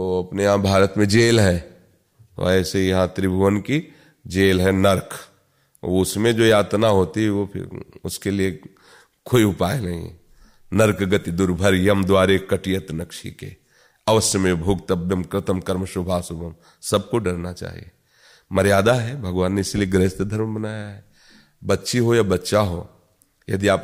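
A speech recording with no technical fault to report. There is nothing here that calls for a time or a cause.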